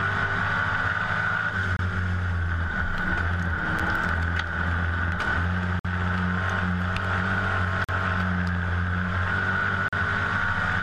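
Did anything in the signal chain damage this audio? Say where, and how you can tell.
Yes: the damage happens at the streaming stage, as a gap between stream segments. Short holes of hard silence cut in at 1.77–1.79 s, 3.79 s, 5.79–5.85 s, 7.84–7.89 s and 9.88–9.93 s, roughly every 2 s, lasting about 8 to 54 ms. Each falls at a 2-second segment boundary where the timestamps fail to meet, so the player pads with silence. No audio is lost. On the waveform each appears as a flat, silent stretch with abrupt edges, and on the spectrogram as a narrow blank vertical stripe across all frequencies.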